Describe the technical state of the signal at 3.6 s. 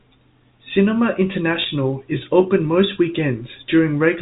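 At 3.6 s the audio is intact, with the speech carried cleanly through its G.711 telephone coding and no fault audible at that moment.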